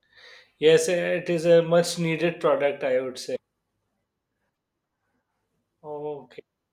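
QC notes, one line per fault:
3.35 s and 4.53 s, broken MP3 bit reservoir: brief skip-ahead glitches, the first right after "needed product I would," likely from lost frames, leaving following frames decoding borrowed bits from wrong data.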